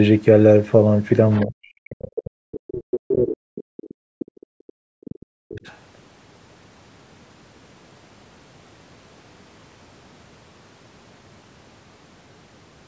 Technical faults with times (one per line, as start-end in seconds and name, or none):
1.31-1.45 other side's voice leaking through
1.43-5.64 speech suppressed in double talk
5.66-5.76 other side's voice leaking through